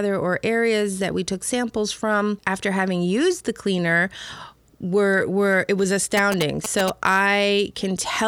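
From 6.17 to 6.90 s, GSM signalling bursts from a nearby 2G phone are rectified, producing galloping ticks and 217 Hz buzz just below the speech.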